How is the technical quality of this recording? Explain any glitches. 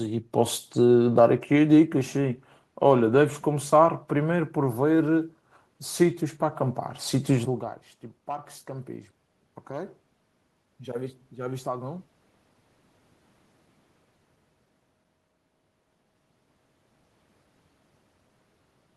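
One glitch stands out: automatic gain rising, from 10.64 to 12.04 s. The input level had fallen by about 19 dB, so the automatic gain control judged the signal too quiet and slowly turned its gain up by about 3 dB over those 1.4 seconds. What gives it away is that the room noise swells along with the speech. That sets it apart from the level change near 7.5 s, where the talker moved relative to the microphone and only the speech changed.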